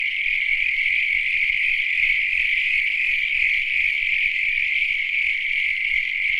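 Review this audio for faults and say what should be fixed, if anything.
No faults; nothing needs fixing.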